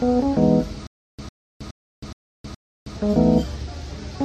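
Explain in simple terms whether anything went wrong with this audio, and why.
Between 0.87 s and 2.97 s there is a stutter with silent gaps. A 101 ms fragment repeats five times, each followed by 318 ms of dead silence, a steady 419 ms cycle. Playback likely stalled and kept retrying its last fragment, so that stretch of audio is lost.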